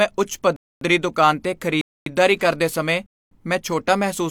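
At 0.56 to 0.81 s, 1.81 to 2.06 s and 3.06 to 3.31 s the speech stops dead for 250 ms each time: a gap between chunks. The audio seems to arrive in one-second blocks with silence inserted at each join, so the sound is interrupted rather than lost. The holes recur every 1.25 s. On a waveform they appear as flat-line segments, and on a spectrogram as clean vertical blank bands.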